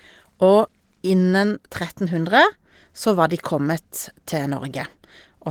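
There are no technical faults to describe in time order in this speech clip.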